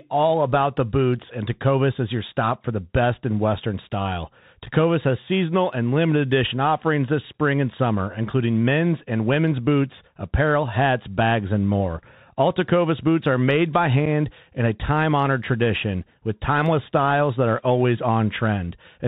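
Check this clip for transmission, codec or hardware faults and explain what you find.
Two faults are present: the whole recording passes through a narrowband Bluetooth headset codec, and one short dropout occurs near the end.

Bluetooth CVSD headset codec, throughout: each sample is coded as a single up-or-down bit with an adapting step, consistent with a 64 kbps link. Nothing above 4 kHz survives, loud bright passages distort as the step lags, sibilants turn scratchy, and a granular hiss sits beneath the speech.

Unconcealed Bluetooth headset packet loss at 14.06 s: roughly one packet failed to arrive, and about 7.5 ms of audio was replaced with silence or an idle pattern rather than patched over. The result is a brief, hard-edged hole that can tick, with the speech returning momentarily quieter.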